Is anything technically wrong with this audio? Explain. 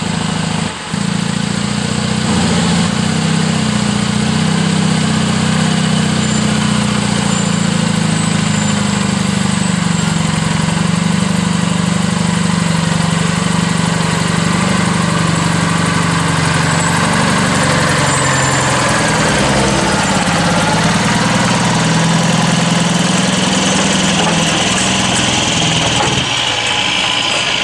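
No, nothing technically wrong stood out on listening to this audio.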